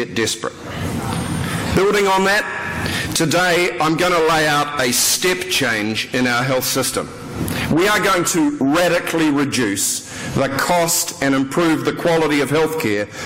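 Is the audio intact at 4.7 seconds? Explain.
Yes, the audio at 4.7 seconds is intact, with no dropout, glitch or other fault at that moment.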